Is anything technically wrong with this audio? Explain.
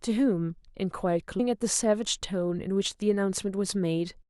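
Yes. There is a stream segment skipped at about 1.39 s. The likely cause is that one segment of a segmented stream failed to load, and the player carried on with the next segment rather than stalling. The speech jumps abruptly forward at that point, with a small blip at the join, and a stretch of the speech between the two segments never plays. The jump shows up as a discontinuity in the flow of the speech.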